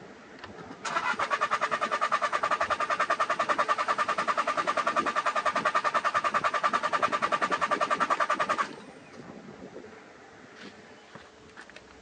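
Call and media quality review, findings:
No technical faults were heard in the signal at any point in the clip.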